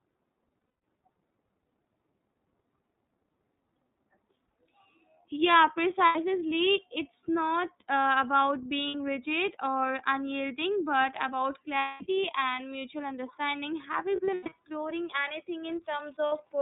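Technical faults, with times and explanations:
Throughout: iLBC codec. The speech is band-limited to narrowband, with nothing above 4 kHz, and has a plainly audible rough, slightly synthetic edge. The rasp fits iLBC's 30 ms, 13.33 kbps mode, which codes each frame's excitation independently of the one before. On a spectrogram, energy stops at a hard ceiling near 4 kHz, and harmonics look smeared and grainy rather than clean. The waveform looks normal in level.
0.59–0.83 s, 6.06–6.15 s, 8.87–8.95 s, 11.79–12.03 s, 14.16–14.52 s, 16.26–16.32 s: lost iLBC frames. In each span the decoder fills missing audio by repeating the last pitch cycle blended with noise, so the gap sounds like a held, buzzy or breathy vowel. The longer concealments at 0.59, 11.79 and 14.16 s total about 210 ms each. At 0.59 s the losses are scattered across 240 ms, with one stretch lasting most of that. At 14.16 s they are spread over 360 ms, with the longest run about a tenth of a second. 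Normal speech returns almost immediately after each gap. On a spectrogram, each gap shows flat, unchanging horizontal harmonic stripes with a noisy wash behind them. The waveform shows a short, regular repeating cycle.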